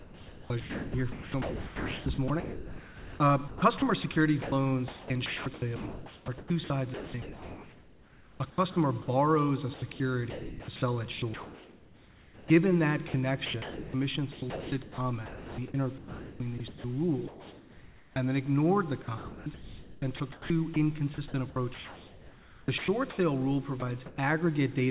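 A call-path voice detector likely switched transmission on and off repeatedly from 0.0 to 9.08 s, 9.74 to 12.5 s, 13.08 to 18.16 s and 19.02 to 23.18 s, so the sound is chopped by the voice detector, with stretches totalling about 5.7, 1.9, 2.8 and 2.3 s swapped for comfort noise. At 23.8 s the detector likely treated a quiet passage as background, and a 20 ms fragment is dropped by the voice detector, replaced by noise. From 23.8 to 24.18 s, likely discontinuous transmission means comfort noise stands in place of the background, a smoother synthetic noise replacing the real ambience. Throughout, the telephone-band sound with nothing above 4 kHz points to a G.711 A-law call codec.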